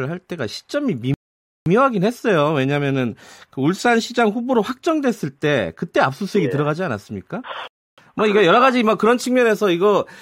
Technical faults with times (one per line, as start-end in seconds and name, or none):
1.14-1.66 rebuffering stall
7.68-7.98 rebuffering stall